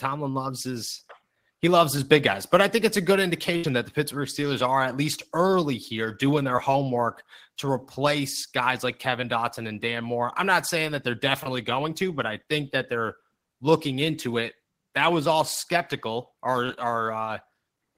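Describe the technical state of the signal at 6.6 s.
A brief smear or wobble sits at 6.56 s, where a sliver of the speech blurs rather than cutting out. This is short concealed packet loss: about 10 ms of audio arrived too late, and the receiver extrapolated from the preceding sound before blending back into the real signal.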